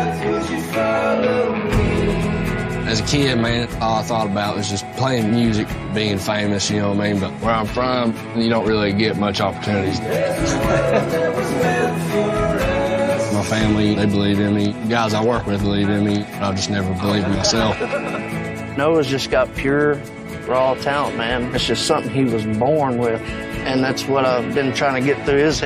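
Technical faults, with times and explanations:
No technical faults can be heard anywhere in this clip.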